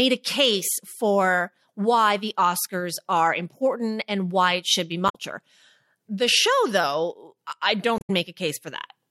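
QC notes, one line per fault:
5.06–5.15 s and 7.96–8.10 s, damaged data in a compressed stream: a short glitch breaks into the speech each time. Corrupted bytes in those frames throw the decoder off, so it spits out garbage until it finds the next clean frame header and resyncs.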